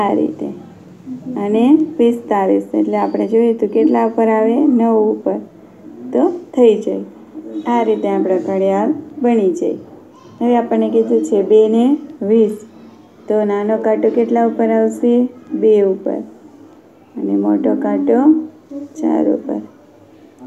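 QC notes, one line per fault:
No faults heard in this clip.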